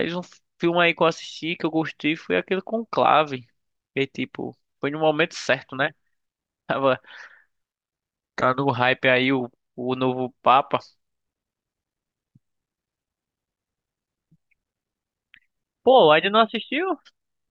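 Nothing stood out as a technical fault on listening to this speech recording.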